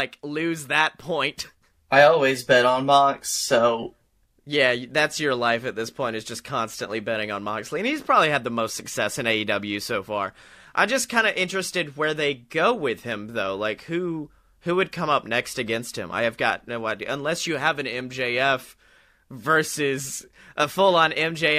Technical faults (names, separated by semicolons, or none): none